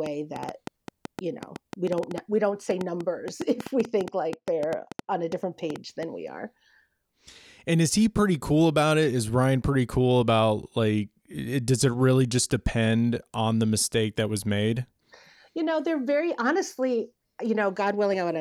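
From 0.06 to 6.04 s, until "we are", a train of clicks ticks at about 6.2 per second, irregularly spaced, roughly 10 dB above the speech, likely from equipment interference.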